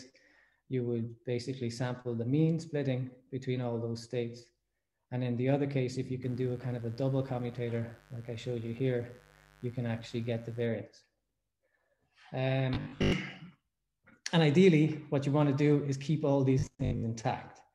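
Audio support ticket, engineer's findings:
Steady raspy buzz, 6.22 to 10.66 s, about 30 dB below signal. Mains buzz: switching spikes twice per 50 Hz cycle and harmonics, likely via dimmer, rectifier or unshielded cable.

Rigid metallic buzz at 50 Hz, 12.74 to 13.12 s and 16.59 to 17.03 s. Robotic sound from repeated short buffers, likely from 20 ms chunks replayed, with most or about half of the audio lost.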